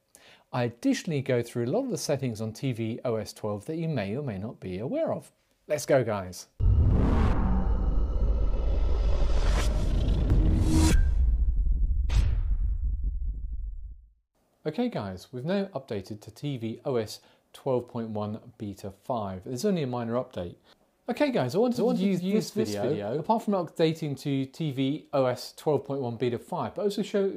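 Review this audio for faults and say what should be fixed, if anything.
From 21.75 to 23.25 s the audio suddenly doubles. A second copy, about as loud as the original, trails it by roughly 300 ms. Every sound is heard twice without any room colour, and the copy cuts in and out abruptly. This doubled audio track is likely caused by the same signal being captured twice, once through a slower path, or by an edit leaving two misaligned copies in the mix. To prevent it, route each source through a single capture path and check edits for overlapping duplicate regions.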